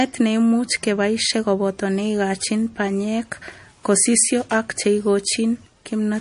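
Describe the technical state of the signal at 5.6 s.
At 5.6 s you're hearing MP3 compression artefacts, present throughout the speech. Nothing survives above 10.6 kHz, and weak frequency lines flicker in and out, giving a watery, swirly edge to s sounds. That's likely a starved encoder, consistent with a bitrate around 40 kbps.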